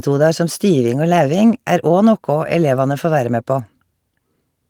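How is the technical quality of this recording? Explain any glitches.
The technical quality of this recording holds up, and there are no glitches to explain.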